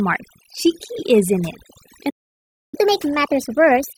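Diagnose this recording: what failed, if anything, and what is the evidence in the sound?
Overdone noise removal runs through the whole clip. This is a call-processing stage. A noise reducer set too aggressively is cutting individual frequency bands whenever they sit near its noise estimate, so the background breaks into twinkling, warbling specks instead of a steady hiss. Unlike codec artefacts, which follow the bitrate and the signal's complexity, these specks appear in the quiet stretches where the noise floor used to be.

A playback stall hits at 2.09 s. The sound stops mid-flow and stays silent for about 0.63 s, until 2.75 s. This is a playback stage problem. The player likely ran out of buffered data or had its thread blocked, and it output nothing until it recovered. A network dropout with concealment would leave a brief filled or smeared gap. Here there is a clean silence of more than half a second, followed by continuation.

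Catch-up at higher speed follows directly, from 2.75 s to the end of the clip. The player resamples its backlog to play it 1.25 times faster, which raises speed and pitch together, the pitch by roughly four semitones. This is also a playback-stage mechanism for winning back the lost time. A sample-rate mismatch would shift the entire recording. This shift starts exactly when the stall ends, which ties it to recovery.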